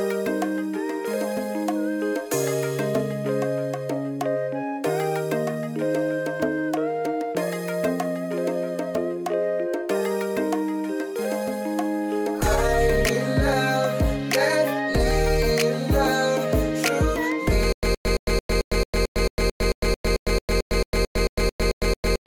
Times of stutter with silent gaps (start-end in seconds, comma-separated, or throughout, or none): 17.72-22.27